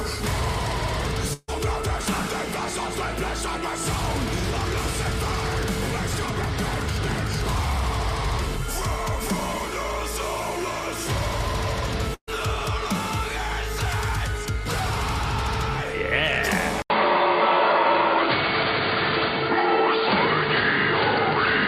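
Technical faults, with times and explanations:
1.33 to 1.50 s and 12.14 to 12.29 s, burst of packet loss. Each time, several packets in a row never arrived in time. The receiver filled the gap by carrying on the last sound and fading it down, for about 145 ms and then about 130 ms. The fill ends in a short silence, about 20 ms the first time and about 70 ms the second. About 140 ms of the original audio is missing after each, so the sound jumps ahead.
16.82 s to the end, input switched to a poorer device. An 80 ms silence cuts in. After it, the sound is duller and boxier. Nothing is heard above 4.7 kHz, so the top end is gone. The level shifts a little, and a faint new background noise sits well below the signal. The band, tone and noise all change at once and never recover. That points to the input likely having moved to another microphone or a headset's call profile.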